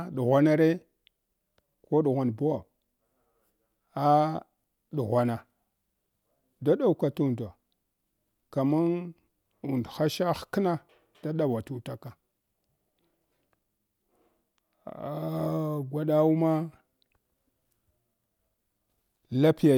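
No technical faults can be heard anywhere in this recording; the signal stays steady and intact throughout.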